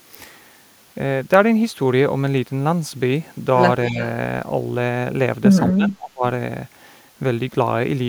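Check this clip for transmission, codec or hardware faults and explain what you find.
Two kinds of fault are audible, both pointing to echo cancellation trouble on a loudspeaker call.

Echo leak, 3.87 to 3.96 s: a very faint copy of the speech returns about 244 ms late, likely from a loudspeaker echo the far side's canceller failed to remove.

Speech suppressed in double talk, 3.89 to 4.01 s and 5.72 to 6.23 s: the speech dips mildly for about a tenth of a second, then drops deeply for about half a second, likely because the canceller muted it as both sides overlapped.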